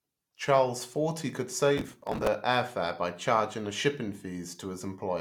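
From 1.78 s to 2.27 s the speech breaks into a burst of processor overload crackle. The system could not finish its small audio buffers in time and missed many deadlines in a row. Each missed buffer was skipped, leaving a tiny hard-edged gap. The buffers seem to be about 5 ms long. Dozens of these gaps run together. They sound like gritty tearing laid over the speech, and the crackle stops once the load passes.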